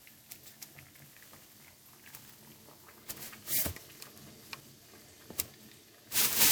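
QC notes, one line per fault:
Throughout, generation loss: the sound is swirly, smeared and hollow, with blurred attacks, beyond what one 128 kbit/s MP3 pass would give. It was likely decoded and re-encoded about seven times, each pass requantising on a shifted frame grid so the noise and spectral holes pile up.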